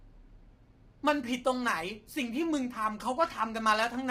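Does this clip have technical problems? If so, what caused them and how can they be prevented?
Yes. Throughout the speech, the voice sounds rough and grainy, with noise filling the gaps between pitch harmonics and a dull or synthetic-sounding top band. This damage is heavy and is likely caused by low-delay AAC compression (AAC-ELD), which fits a bitrate around 24 kbps. Its short frames separate harmonics poorly, so at that rate the encoder runs out of bits. To prevent it, raise the bitrate or use a longer-frame codec when low delay isn't needed.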